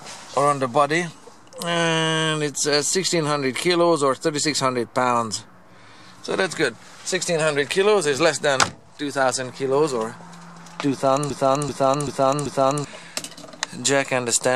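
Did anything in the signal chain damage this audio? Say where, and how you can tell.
Yes. From 11.30 to 12.85 s, a 0.39 s fragment plays four times back to back. This is a broken-record loop, likely from a playback or stream stage that stalled and kept resending its last chunk. A waveform or spectrogram shows identical repeating blocks, and the audio that belonged there is missing.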